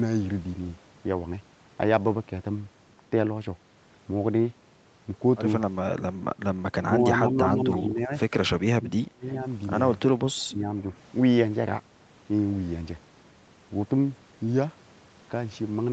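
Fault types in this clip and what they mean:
Speech suppressed in double talk, 5.96–6.06, 6.82–6.91, 7.09–8.12, 8.6–9.28 and 10.31–10.84 s: the speech drops by about 10 to 25 dB in chunks, likely an echo canceller ducking its own talker while the far end spoke.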